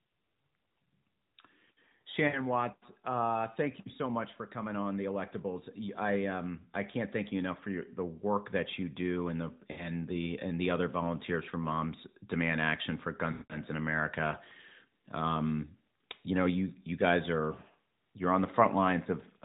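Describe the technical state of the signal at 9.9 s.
Lost AMR speech frames run from 9.72 to 9.89 s, about 60 ms, which fits three 20 ms frames failing their check. The decoder repeats the last good pitch and vocal-tract settings at falling gain, so the sound smears and fades, returning briefly weak or rough right around 9.9 s.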